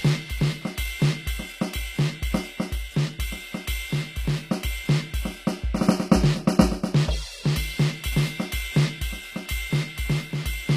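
The music was most likely passed through HE-AAC compression, which fits the v2 profile at a low bitrate around 24 kbps. The encoder keeps only the lower spectrum and synthesises the treble by copying lower bands upward under a coarse envelope, so the top end is an imitation whose harmonics fail to line up with those below. Across the whole clip the highs sound gritty and metallic, with nothing present above 15.5 kHz.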